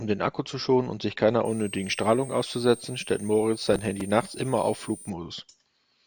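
Just after "schonen und sich keiner", at 1.45 s, a thin high whistle rises under the speech, wandering between about 8.3 and 9.1 kHz at roughly 20 dB below it until 5.10 s. This is switching supply whistle: a power converter running in an audible burst mode, its pitch shifting with load.

From 3.72 to 4.01 s a gritty tearing crackle rides over the speech. This is processor overload crackle: the processor repeatedly missed its deadlines, and each short buffer was filled with a hard-edged chunk of old audio. The grain fits buffers of roughly 3 ms, with several missed in a row.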